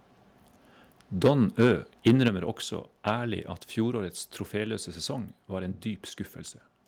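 Microphone overload at 1.24–1.31, 1.6–1.71, 2.06–2.28 and 3.07–3.1 s gives harsh crackle, likely from input gain pushing peaks up to about 7 dB past full scale; waveform tops look flattened, with spectrogram smearing upward. Microphone volume stepped down at 1.28 s (about 2 dB) and 2.28 s (about 5 dB), likely automatic gain reacting to clipping, shows as abrupt envelope drops.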